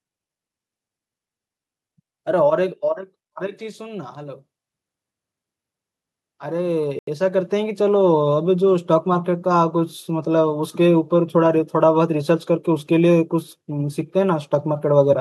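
A speech recording with two bouts of automatic gain rising: from 3.34 to 4.48 s the level climbs by about 5 dB, and from 6.39 to 7.82 s by about 6 dB. Voice and background noise swell together over more than a second, which separates it from a talker leaning closer. Inside the second rise, at 6.99 to 7.08 s, the sound cuts to 84 ms of clean silence and then resumes, likely a Bluetooth stall where the headphone buffer ran dry. The cut is abrupt, not a gradual fade.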